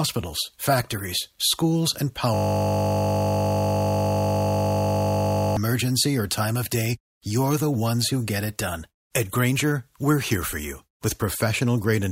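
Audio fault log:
2.34–5.57 s, system hang loop: one 20 ms slice of the speech repeats exactly at 50 Hz, a steady buzz rather than a machine-gun stutter or silent dropout.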